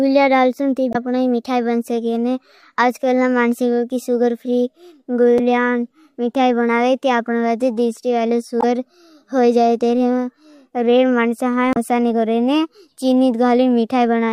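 Damaged data in a compressed stream causes short blips at 0.90–0.96, 5.36–5.40, 8.60–8.64 and 11.73–11.77 s. Corrupted bytes make the decoder misread frames and lose sync. It then hunts for the next frame header. Each spot sounds like a brief chirp, squawk, click or short hole in the speech.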